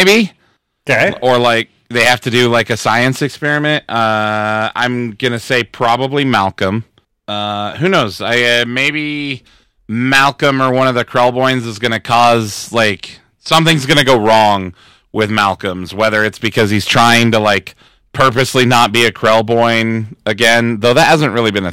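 From start to finish, every louder syllable carries a harsh, buzzing fuzz, with gritty crackle on the strongest peaks, while quieter passages pass more cleanly. This is hard clipping: the speech was pushed roughly 16 dB beyond what some stage in the chain could handle, so the waveform's peaks were sheared off flat. Only a small fraction of the samples, around three percent, hit the ceiling, but those flattened tops add dense high harmonics, which produce the rasp.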